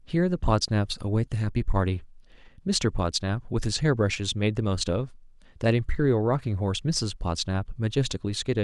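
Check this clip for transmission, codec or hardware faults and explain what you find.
No faults turned up when checking this clip.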